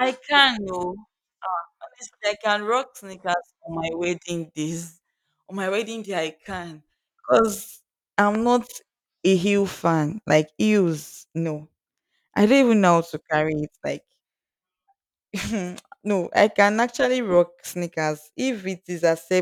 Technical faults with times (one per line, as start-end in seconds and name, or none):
8.35-8.37 loud pop